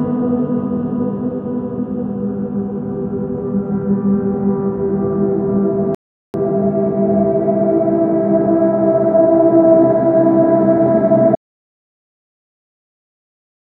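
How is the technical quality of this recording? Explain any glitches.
Two glitches stand out. At 5.95 s there's a rebuffering stall: the player ran dry of downloaded audio and paused for about 0.39 s until more arrived. The sound drops to silence, then picks up exactly where it left off, so nothing's missing, just time added.

From 11.35 s to the end there's an audio dropout to silence. The gap is silent, with no room tone at all. That's likely the input being lost, from a disconnect or stray mute, while the recorder kept writing silence. Whatever happened in those last 2.4 seconds is gone.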